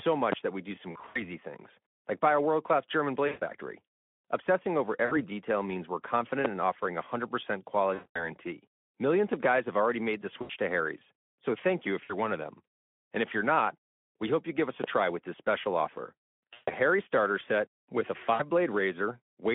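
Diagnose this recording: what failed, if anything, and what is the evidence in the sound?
Loud pop at 0.32–0.36 s, 6.45–6.48 s and 14.84–14.87 s: each is a single sharp pop lasting about 30 ms and peaking around 20 dB above the speech, with the speech continuing underneath. The three identical isolated transients point to the analogue wiring or driver stage, with the likely cause being a voltage step from a connector, switch or static discharge that the downstream circuitry shapes into a brief pulse.

VoIP packet loss concealed by the speech codec occurs at the network and codec stages, at 0.91–1.23 s, 3.27–3.43 s, 5.05–5.17 s, 7.93–8.29 s, 10.41–10.51 s, 12.03–12.14 s, 16.53–16.71 s and 18.33–18.43 s. Gaps run from 60 ms to 220 ms. The first is scattered over 240 ms with an 80 ms run, and the steps fit 20 ms frames. In each gap the Speex decoder, working within its 200–3400 Hz narrowband line, extends the last pitch and filter into a buzzy tone or coloured noise that fades, and the speech stays weakened briefly after packets resume.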